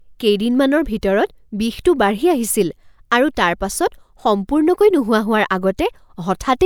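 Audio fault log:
No faults found in the speech audio; nothing to log.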